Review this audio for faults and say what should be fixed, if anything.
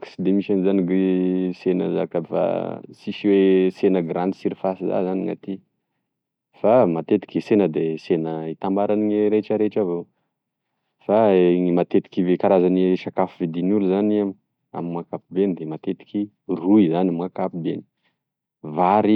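Nothing stood out on listening, so there is nothing here that needs fixing.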